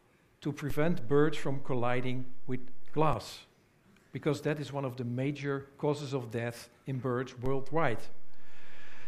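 The waveform's zero line jumps at 0.70 s, a DC step of about -28 dBFS that holds until it drops back at 3.13 s. A second step of about -27 dBFS arrives at 7.46 s and persists to the end. Each jump sounds as a low thump or click beneath the unchanged sound.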